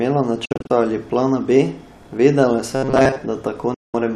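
Digital broadcast dropout breaks this speech clip twice. From 0.45 to 0.71 s, just before "ali plana", the sound is muted in several short holes, each faded over 8 ms and the longest 48 ms. About 144 ms of audio is lost over 240 ms, which fits frames of about 24 ms failing and being silenced by the receiver. At 3.74 to 3.95 s a single gap of 192 ms follows the same pattern. Whatever was sent during those holes is gone. Robotic sound from repeated short buffers is heard from 2.72 to 3.17 s, where the speech turns into a rigid, metallic buzz at 133 Hz that only loosely follows the speech. The likely cause is audio arriving too slowly, so a buffer of about 7.5 ms keeps being replayed in place of most of the real signal in that stretch.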